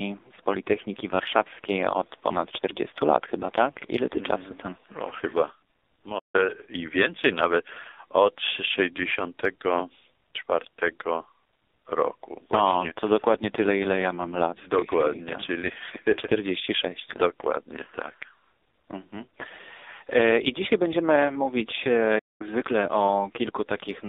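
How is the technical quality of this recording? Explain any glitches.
Technical quality is poor. The whole recording passes through the AMR narrowband mobile codec with heavy damage. Sound is confined to roughly 300 Hz to 3.7 kHz. Very few bits describe each frame, which fits a rate near 6 kbps. The speech comes out buzzy, thin and synthetic.

There are two playback stalls. At 6.18 s the audio stops for about 0.15 s, then resumes on "i więcej nawet od". At 22.18 s, right after "I dzisiaj będziemy mówić", it drops out for about 0.21 s. The player likely ran short of data and fell silent until it recovered.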